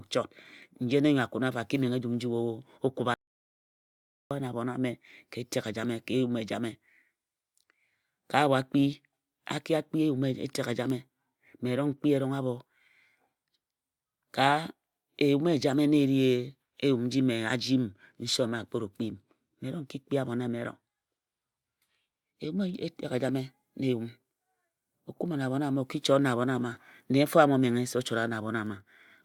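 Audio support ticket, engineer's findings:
Audio dropout to silence, 3.14–4.31 s: speech cuts off abruptly, about 1.17 s of dead digital silence, no room tone. Waveform flat; spectrogram a fully black vertical band. Likely input loss (link failure, disconnect or mute) while the recorder kept writing zeros.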